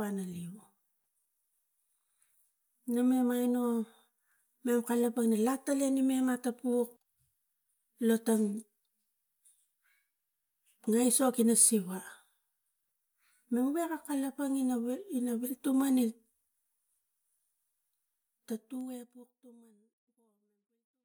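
There are no technical faults to describe in this speech, which ends in a smooth fade-out over roughly its last three seconds.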